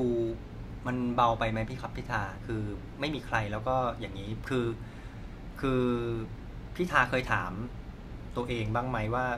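No technical faults can be heard anywhere in the clip.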